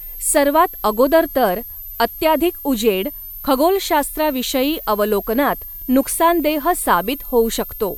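A switching supply whistle runs throughout the speech, a thin high tone that wanders between about 12.1 and 13.9 kHz, sitting roughly 15 dB below the speech. A switching power supply feeding the recording chain has dropped into an audible burst mode, or is beating against a second supply. As the load on it shifts, the whistle's pitch drifts within that band instead of holding steady.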